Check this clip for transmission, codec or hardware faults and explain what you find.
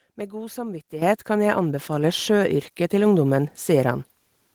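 There is one fault, heard twice. Microphone volume stepped up at 1.02 s (about 10 dB) and 2.04 s (about 3 dB): the input volume was raised abruptly, so the speech and background noise jump together instantly, unlike a speaker simply talking louder.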